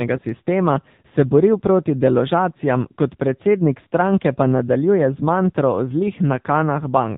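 From start to finish the speech passes through an AMR narrowband mobile codec, the old 2G/3G phone coder that rebuilds the voice from a vocal-tract model excited by sparse pulses. Its damage is plainly audible: voices sound buzzy, thin and synthetic, which fits a low mode near 7.4 kbps. A spectrogram shows a flat ceiling at 4 kHz with nothing above it, and the harmonics below it look smeared in 20 ms blocks.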